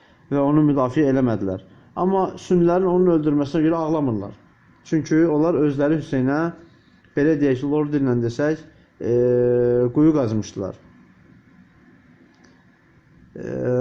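No technical faults can be heard anywhere in this audio; the signal stays steady and intact throughout.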